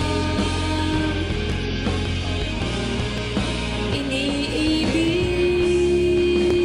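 Clocks likely drifting several hundred ppm apart force clock drift buffer slips of a few dozen samples, heard as clicks every 1.67 s from 1.52 to 6.51 s.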